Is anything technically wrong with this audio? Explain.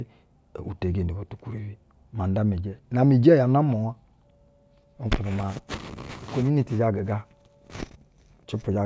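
No, nothing technically wrong can be heard here.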